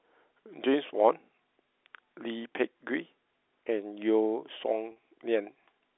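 Packet loss with pitch repetition hits this speech clip at 4.92 to 4.96 s, a 40 ms gap that fits two lost 20 ms packets. Rather than dropping to silence, the receiver fills the hole by looping the last pitch period it received, so the voice briefly sounds held and slightly buzzy before normal speech resumes. The clip travels over G.711 telephone coding, heard as a narrow line band of roughly 300 Hz to 3.6 kHz.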